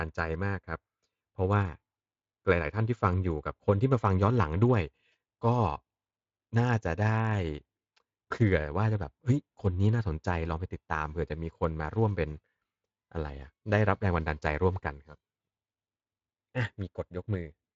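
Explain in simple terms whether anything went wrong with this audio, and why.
Nothing stood out on listening to this speech recording, which sounds like it came through an ordinary voice-chat connection.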